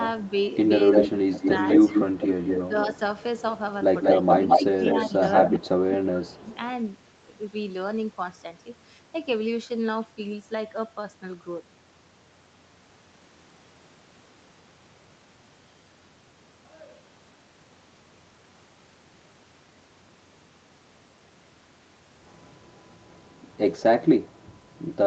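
At 0.92 s an echo leak starts: a copy of the speech trails about 0.2 s behind, only about 5 dB quieter, running to 2.95 s. That's likely a loudspeaker on the other end whose echo canceller let the pickup slip back through. Inside it, speech suppressed in double talk hits at 1.01 to 1.52 s, dipping the talker by roughly 15 dB, then again at 2.68 to 3.00 s, roughly 10 dB down. That's likely the canceller failing to separate talker from echo and ducking both. The echo returns from 4.02 to 5.59 s, now about as loud as the speech itself. Meanwhile there's a light dip at 4.20 to 4.64 s and the worst one at 5.08 to 6.46 s, roughly 20 dB, pulling the talker down for about a second. A last faint echo scrap, about 30 dB down, shows up at 6.49 to 6.57 s.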